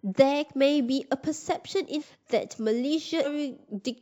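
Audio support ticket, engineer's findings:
Sample clock jitter, whole clip. Faint hiss and grit riding on the speech, worse on louder and brighter bits, gone in the pauses. Probably the converter clock wobbling by something like a microsecond or two rms, so samples land a touch early or late. Error sits about 40 dB under the signal, worst on steep waveform slopes.

Compressed frames skipped, 3.23 to 3.27 s. Sudden jump where the speech lurches forward, with roughly a second of audio gone. The jump fits frames of about 46 ms, so around twenty frames dropped or rejected by the decoder.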